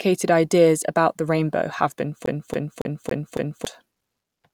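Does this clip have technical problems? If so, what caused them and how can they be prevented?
Yes. A scratch made the CD player's laser jump back one track at the same point on each revolution, so the disc got stuck on one turn from 2.26 to 3.65 s: a 0.28 s stretch of speech repeats five times, with a brief mute at each jump, giving a fast, even stutter. Cleaning or replacing the disc, or ripping it with an error-correcting tool, prevents this.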